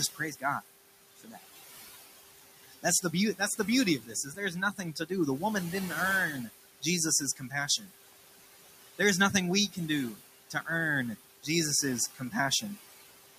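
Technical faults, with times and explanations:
throughout: noise suppressor artifacts. The room noise swells under the speech and sinks between phrases, as the suppressor pulls it down by about 16 dB.
0.15–0.44 s, 1.17–1.44 s, 2.63–3.04 s, 4.0–5.11 s (after "that's the beauty"), 7.36–7.9 s, 12.14–12.63 s: speech cut by the noise suppressor. Soft sounds go faint, dropping by about 13 to 17 dB, because the suppressor mistook them for noise.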